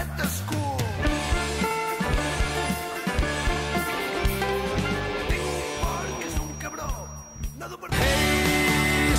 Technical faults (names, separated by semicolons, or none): feedback whistle